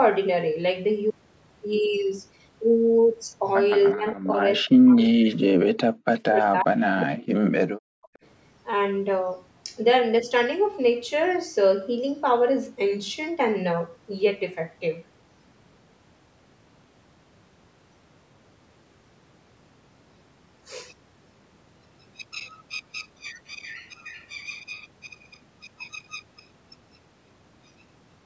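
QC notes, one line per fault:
3.94–4.40 s and 4.61–8.09 s, speech suppressed in double talk: the echo canceller likely could not tell the near talker from loudspeaker echo while both sides spoke, so it turned the whole signal down. The first dip lasts a few tenths of a second and drops about 20 dB. The second is longer, affecting roughly three seconds of the span, and goes as deep as about 40 dB, so the speech fades and breaks up in pieces.
6.15–6.20 s and 8.14–8.26 s, echo leak: the loudspeaker side's echo canceller likely failed to fully remove its loudspeaker's sound from its microphone, so brief scraps of the voice return delayed by about 360 ms. The first scrap sits about 25 dB below the speech. The second, right after the suppression ends, is about 40 dB down.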